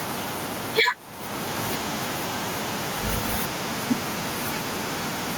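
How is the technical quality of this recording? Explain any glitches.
The recording suffers from gain pumping that runs through the whole clip. The level breathes: during pauses the faint room noise, which otherwise sits about 43 dB below the speech, swells up, then drops by around 10 dB as each loud syllable arrives, so the speech sounds squashed and flat in dynamics. The likely cause is input gain set far too high with a fast limiter or compressor clamping down on every peak. On a waveform the speech peaks look flattened to a similar height, while the gaps show a rising noise floor; on a spectrogram the broadband background brightens between phrases and darkens under each burst of speech.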